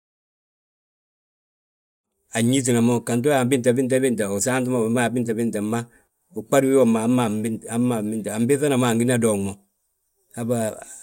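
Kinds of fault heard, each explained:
No faults are audible in this speech, and the gradual level rise that completes by 2.44 s is a deliberate edit with no click or hard edge.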